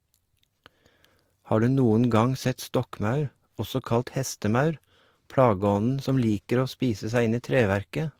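Throughout the speech, the audio was likely passed through more than one lossy codec, pointing to a Vorbis encode at a moderate bitrate followed by a lower-rate Opus encode. The second stage spends bits preserving the first stage's artefacts while adding its own, so the two kinds of coding damage are heard layered together.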